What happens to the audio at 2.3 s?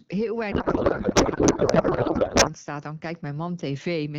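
At 2.3 s the clip is inside a codec payload misread that runs from 0.52 to 2.53 s. The AMR frames were packed octet-aligned, but the decoder unpacks them as bandwidth-efficient, so every field lands in the wrong place. The speech gives way to garbled noise and warble that barely tracks it. Unlike packet loss, there are no gaps or brief glitches. The damage is continuous and stops sharply once the packing matches, returning to clean wideband speech.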